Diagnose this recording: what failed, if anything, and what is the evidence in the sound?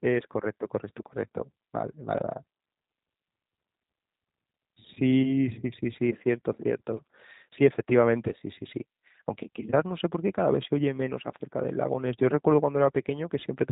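The failure is at the codec stage: the speech has passed through a G.729 codec from start to finish. The whole recording sounds slightly rough and synthetic, with a buzzy, reconstructed quality. On a spectrogram, energy stops sharply at about 3.8 kHz for the entire length. That fits an 8 kbit/s G.729A coder, which rebuilds each 10 ms frame from a vocal-tract filter, a pitch predictor and a few pulses instead of the original waveform.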